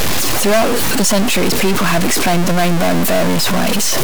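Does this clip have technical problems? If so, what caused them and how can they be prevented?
Yes. Throughout the speech there is a harsh, buzzy distortion, and the pauses fill with loud noise instead of silence. This is likely a stuck bit: one high-order data bit is held fixed, so about half the samples are offset by a step of about -10 dBFS, flipping with the sign of small values. A waveform shows thick blocky bands across the silences, and a spectrogram shows broadband smear filling every gap. Testing converters and data lines with a ramp signal catches this before recording.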